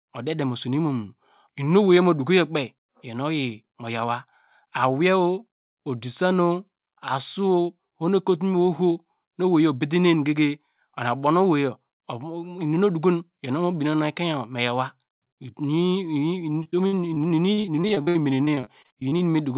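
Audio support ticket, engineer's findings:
Repeated packet loss (robotic sound), 16.52–19.35 s: choppy speech, 26 short holes, longest 61 ms, roughly a fifth of the stretch filled by stretching the preceding sound. Jitter buffer/concealment. Unlike a single dropout, the holes recur in quick succession. Nothing above 4 kHz, consistent with a G.711 narrowband call path.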